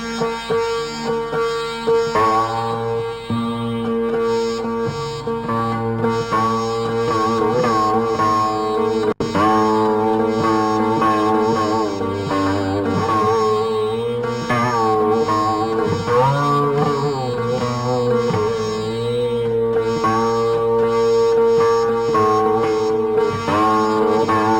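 Throughout the clip, the audio shows imaging from linear upsampling, consistent with a 12 kHz source raised to 44.1 kHz by drawing straight lines between samples. That crude interpolation filters poorly, so the top of the band is dulled, and a faint mirrored copy of the spectrum survives from 6 kHz up to 12 kHz, roughly 30 dB below the signal. It comes across as a light metallic shimmer on the brightest, hissiest parts of the sound.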